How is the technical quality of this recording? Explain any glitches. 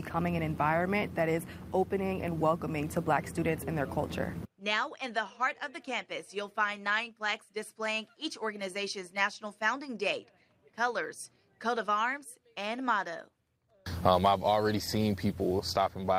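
Nothing stood out on listening: no glitches or other technical problems came through anywhere in the recording.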